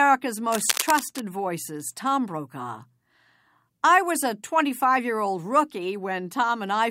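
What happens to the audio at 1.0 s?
At 1.0 s, dense, uneven scratching and rustling sits over the speech, only slightly quieter than it, running from 0.46 to 1.20 s. This is cable scratch noise, likely from a worn cable or connector being moved, its contact resistance jumping rapidly and injecting noise bursts.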